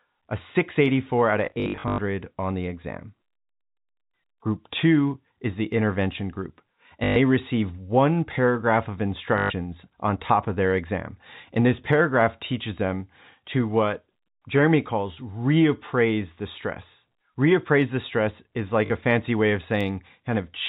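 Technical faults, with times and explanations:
1.46–1.98 s, 7.04–7.16 s, 9.38–9.50 s, 18.86 s: packet loss with last packet repeated. Replayed segments, consistent with 20 ms packets, buzz near 50 Hz, giving robotic stutters.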